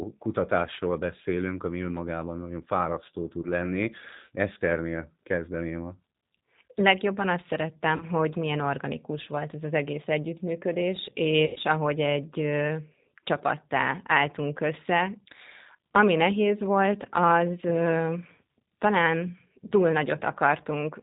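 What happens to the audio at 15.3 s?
Nothing new begins at 15.3 s; the speech there carries the same G.729 codec damage heard across the whole clip. The coder rebuilds each short frame from a vocal tract filter, a pitch guess and a few pulses, which fits an 8 kbit/s rate, so everything above 4 kHz is gone and the voice sounds rough and buzzy. A plain low-pass filter would only dull the sound; this adds a synthetic grain.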